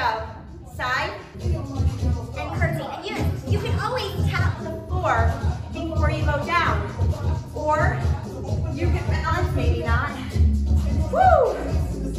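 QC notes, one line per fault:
1.24–1.35 s, 4.75–4.95 s and 9.15–9.26 s: AAC frame loss with concealment. Three short holes, about 85 ms, 128 ms and 85 ms long, which fits two, three and two lost frames. The decoder patches each gap from the last good spectrum, so the sound turns smeared, noisy and phasey rather than going silent. On a spectrogram, each patch shows blurred, repeated harmonics with hazy noise between them. The waveform stays filled in, with no gap.
2.49–4.55 s: section at the wrong speed. About two seconds play 1.12 times too fast, so pitch rises by about two semitones and timing feels hurried, then drops back to normal. The likely cause is an editor or player running that stretch on the wrong clock. On a spectrogram, harmonics step up and their spacing widens for exactly that span. On the waveform, events sit closer together.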